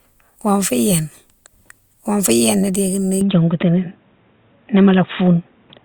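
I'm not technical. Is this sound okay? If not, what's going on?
No. From 3.21 s, right after "wonfou yéna dékini", the speech turns dull and boxy until the end, with nothing above 3.8 kHz. This is likely an input switched to a poorer device. The loudness and background noise change along with the tone, which points to another microphone rather than the same one muffled.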